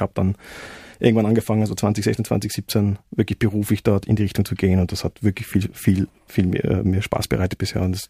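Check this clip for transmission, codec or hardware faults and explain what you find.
No faults turned up when checking this clip.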